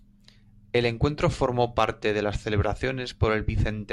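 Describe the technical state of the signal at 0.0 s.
At 0.0 s the speech signal is intact, with no audible fault at that moment.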